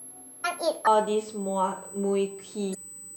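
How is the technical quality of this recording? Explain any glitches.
The technical quality is poor, with a constant whine, a sped-up opening and two decoding glitches.

USB whine runs throughout at 8 kHz, about 20 dB below the speech, as bus microframe current leaks into the audio. It shows as a steady horizontal line on a spectrogram.

A section at the wrong speed spans 0 to 0.87 s. It plays 1.39 times fast and about five semitones high, likely from playback against the wrong clock. Harmonics sit visibly higher and more widely spaced.

Damaged data in a compressed stream causes brief glitches at 0.43 s and from 2.71 to 2.75 s as the decoder loses frame sync. Each appears as a short broadband smear or waveform discontinuity.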